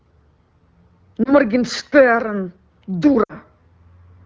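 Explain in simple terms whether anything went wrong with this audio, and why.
Two short dropouts come from lost AMR speech frames, a phone-network fault in which radio errors corrupt pieces of the coded speech. The receiver then patches each gap by repeating the last good sound at falling volume. At 1.23 to 1.32 s there is a brief dip or warble, which fits one lost 20 ms frame. At 3.23 to 3.33 s a longer gap of about 60 ms drops to near silence before the speech returns weak or rough. The connection uses the AMR wideband (HD Voice) codec.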